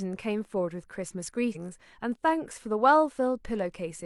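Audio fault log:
1.52–1.57 s compressed frames skipped: the sound jumps ahead about four 42.7 ms frames, roughly 150 ms lost.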